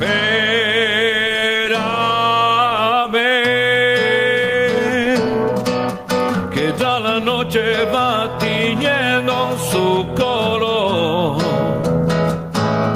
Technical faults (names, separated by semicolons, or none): gain pumping